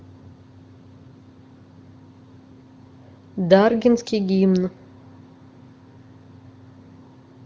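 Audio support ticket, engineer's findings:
No fault found in the speech: the band stops near 7.4 kHz, as expected for the AMR wideband (HD Voice) codec, and the faint-at-most coding texture points to one of its upper rates, around 23 kbit/s.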